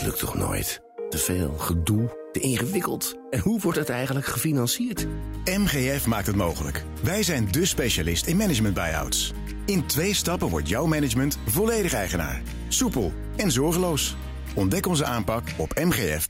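Nothing in this audio stood out as a technical problem on listening.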